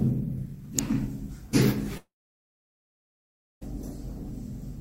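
At 0.79 s, a nearby switch, motor or static discharge likely arced and the audio line picked up the burst, giving an electrical switching spike: a sharp snap laid on top of the sound, over almost as soon as it starts.

From 1.97 s to 3.63 s, a long network dropout, likely from the stream failing to arrive, loses about 1.64 s of audio. The receiver briefly continues the last sound as a fading buzz or hiss, then about 1.5 s of silence follows before the sound resumes, with the missing stretch gone.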